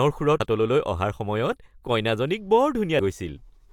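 Damaged data in the compressed stream corrupts the frames at 0.40 s and 2.99 s, so the decoder misreads them and loses sync while hunting for the next valid frame header. Each break comes through the speech as a brief chirp, squawk, click or short hole.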